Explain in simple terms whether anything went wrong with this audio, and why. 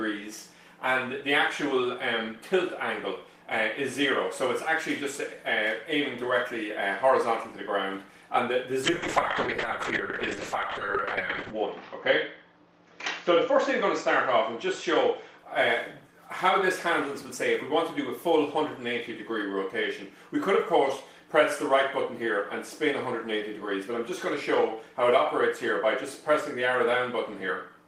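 Yes. From 8.84 to 15.44 s there is a call bitrate drop: the connection briefly got squeezed, so the sound was sent in much less detail. It turns rough and muffled, losing its crisp top end for about 2.7 s at worst. Unlike packet loss, it never cuts out.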